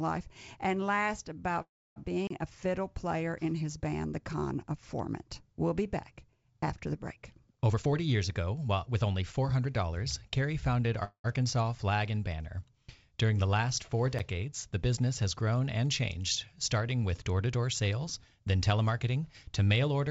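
At 1.62 s the speech turns into a brief fading buzz and then drops to near silence for about 290 ms before resuming at 1.98 s with nothing lost. This is a call audio freeze, likely from delayed packets emptying the jitter buffer, so the receiver stretched the last sound and inserted a 341 ms gap.

From 2.27 to 2.30 s a 32 ms hole opens. This is a block of digital silence: samples were zeroed and the sound cuts off with no fade.

Right after "back after the break", from 7.70 to 10.35 s, the speech sounds hurried but keeps its pitch. This is a jitter buffer speed-up: to shed surplus delay, the receiver snipped short pitch-period pieces repeatedly, playing at about 113% speed and removing roughly a third of a second.

At 11.04 s a second call audio freeze fills 198 ms with a decaying tail that includes about 80 ms of near silence, then picks up again at 11.29 s.

At 14.19 s, between "the last four" and "the business has grown", a second block of digital silence leaves a 10.7 ms tick. 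That length fits a 512-sample buffer that wasn't filled in time.

Throughout the clip, the call codec path leaves nothing above 8 kHz.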